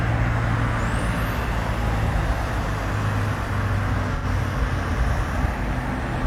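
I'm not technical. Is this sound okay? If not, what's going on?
No, there's one glitch. Around 4.14 to 4.25 s, roughly a tenth of a second goes smeared and a bit hissy. That's AAC frame loss with concealment: a couple of chunks of audio went missing, and the player patched the gap by guessing from the sound just before it.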